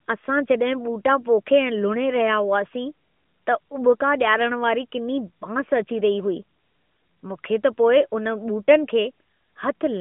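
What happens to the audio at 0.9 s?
Nothing goes wrong at 0.9 s: the speech there is intact, carried through the narrowband mobile-phone band of an AMR-NB link at 12.2 kbps.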